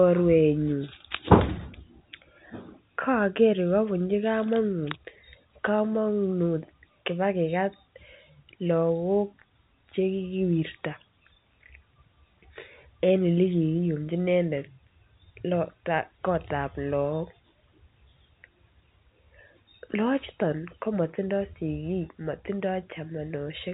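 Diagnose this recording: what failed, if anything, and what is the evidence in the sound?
Nothing in the chain has failed: the speech arrives over G.711 telephone coding as intended, with the band stopping at about 3.8 kHz as that path dictates, and no stage shows any fault.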